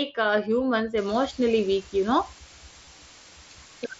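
From 0.98 s to the end there's a steady, even hiss sitting roughly 20 dB under the speech. That's low bit depth with dither, consistent with about 6 bits, and it comes with no distortion. At 2.85 s comes a brief concealed Bluetooth headset packet loss: about 15 ms went missing, likely a couple of frames, and the receiver patched the gap with a repeated snippet of the preceding waveform.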